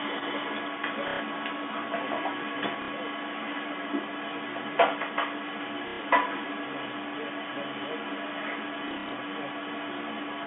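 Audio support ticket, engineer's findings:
Echo leak, 0.00–10.46 s: delayed copy of the speech running about 235 ms behind, roughly 10 dB under the direct signal. Likely an echo canceller on a loudspeaker endpoint that failed to remove the mic pickup, so its residual returns on the line.

Packet loss with last packet repeated, 1.08–1.20 s: 120 ms gap filled by replaying the last received packet. The run buzzes as a brief robotic stutter.

Same fault at 2.82–2.88 s (60 ms) and 5.88–6.00 s (120 ms). Gap sizes fit 30 ms packets, so the stutter pulses near 33 Hz.

Same fault at 8.88–9.12 s: 150 ms lost across 240 ms, longest run 60 ms. Several short stutters rather than one.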